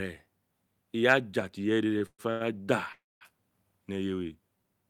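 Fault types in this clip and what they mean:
Repeated stalls (stutter): Between 1.93 and 2.42 s the speech catches four times, the longest hold lasting 123 ms, so about half of that half-second is stretched sound rather than new speech. Packets arrived too slowly, the jitter buffer kept emptying, and the receiver prolonged the last sound each time. Nothing is lost; the speech simply drags. A spectrogram shows four smeared, frozen horizontal bands; the waveform shows repeated flat-envelope stretches.
Call audio freeze: From 2.92 to 3.23 s the speech halts. The last sound lingers briefly as a fading buzz, then about 220 ms of silence follows, and the speech resumes exactly where it stopped, now running 286 ms behind. This likely comes from packets held up in transit that emptied the jitter buffer. On a spectrogram a smeared band dies into a blank column; the waveform decays to a flat line.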